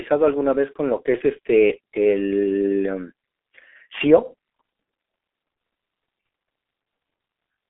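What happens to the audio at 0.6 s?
At 0.6 s the speech carries the G.723.1 codec damage present throughout the clip. Nothing passes above 3.6 kHz, and heavy low-rate coding, consistent with roughly 6 kbit/s, leaves it muffled and hoarse with smeared consonants. Plain band-limiting would sound thin but stay clean rather than rough.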